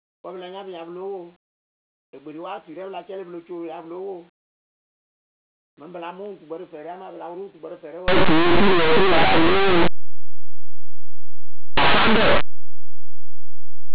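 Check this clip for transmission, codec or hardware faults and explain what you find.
There's one fault. From 8.08 s to the end, the speech collapses into very loud, harsh distortion. That's linear audio read as companded: plain 8-bit samples are being expanded as if they were mu-law codes, so tiny values just on one side of zero jump to maximum output. Before that, the audio is intact.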